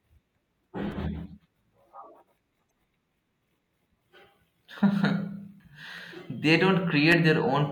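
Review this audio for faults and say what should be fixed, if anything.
Sharp single clicks occur at 0.92 s, 5.98 s and 7.12 s, each a thin vertical line across the spectrum. The likely cause is dropped samples. Well under a millisecond goes missing, so the waveform jumps straight to a later value. Give the capture chain enough buffering that it never skips samples.

From 2.68 to 2.71 s there is a brief glitch. This is damaged data in a compressed stream. Corrupt bytes make the decoder misread frames, lose sync, and search for the next frame header. Verify files with checksums after every transfer.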